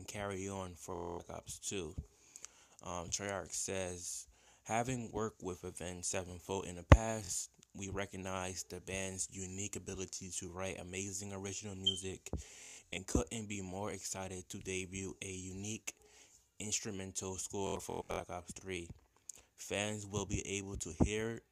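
Bluetooth stutter hits at 0.95, 7.25, 12.63 and 17.67 s: dropped packets make the receiver loop a short slice into a buzzy repeat, then the audio jumps ahead.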